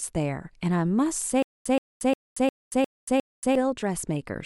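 From 1.43 s to 3.55 s the speech breaks into a stutter with silent gaps. A 125 ms fragment plays, then about 230 ms of dead digital silence follows, and the same fragment returns six times at a steady 355 ms period. The likely cause is a stalled player or stream that replays its last buffered chunk on each retry before running dry, so the speech due in that span never arrives.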